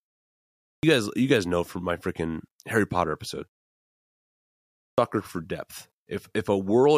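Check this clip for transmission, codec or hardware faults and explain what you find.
Two clipped starts after a pause: about 0.40 s lost from 0.43 to 0.83 s, after 0.43 s of silence, and about 0.38 s lost from 4.60 to 4.98 s, after a 1.17 s pause. The output device dozes during silence and needs time to wake or relock, so the speech bursts in abruptly with its opening sounds missing.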